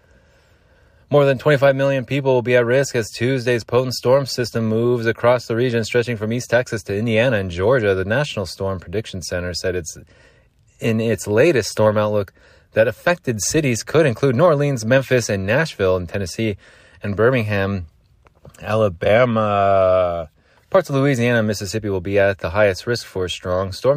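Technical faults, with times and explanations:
No technical faults detected.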